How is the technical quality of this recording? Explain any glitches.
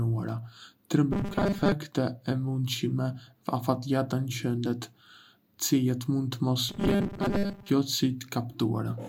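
The recording has two spells of robotic sound from repeated short buffers, from 1.13 to 1.73 s and from 6.69 to 7.72 s. In both, the speech turns into a rigid, metallic buzz locked at 200 Hz that only loosely tracks the words. This is likely caused by audio arriving too slowly, with the software looping a tiny fragment in place of most of the missing signal. The 200 Hz tone fits a repeated 5 ms buffer.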